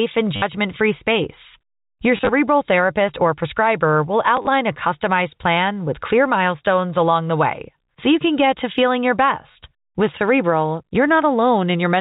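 At 0.36 to 0.42 s, 2.17 to 2.29 s, 4.37 to 4.47 s and 9.52 to 9.55 s, the speech stutters robotically. This is packet loss with the last packet repeated: missing chunks were filled by replaying the previous one. The gaps total 60, 70, 50 and 30 ms, and the middle two are broken into short scattered runs. Each loop buzzes near 100 Hz, which fits 10 ms packets. That buzz sets it apart from silent dropouts. The narrowband telephone quality remains.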